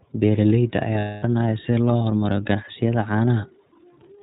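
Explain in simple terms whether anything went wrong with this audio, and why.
The speech was squeezed through the iLBC codec, a compression scheme built for internet phone calls. It keeps only the lower part of the sound, throwing away everything above about 4 kHz, and rebuilds the voice from a simplified model in short, separate slices. The result here is plainly audible: the voice sounds muffled like a phone line and has a slightly rough, synthetic edge from start to finish.

There are also lost iLBC frames. Some data packets went missing between about 0.98 and 1.23 seconds, a gap of roughly a quarter of a second. That fits several 30 ms slices going missing in a row. With nothing to play, the decoder filled the hole by repeating the last bit of voice it had, mixed with noise and fading as the gap went on. You hear this as a held, slightly buzzy or breathy vowel-like sound. Because each slice is decoded on its own, the voice snaps back to normal almost immediately afterwards.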